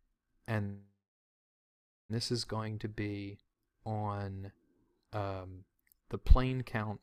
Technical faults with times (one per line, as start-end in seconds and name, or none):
0.65-2.11 call audio freeze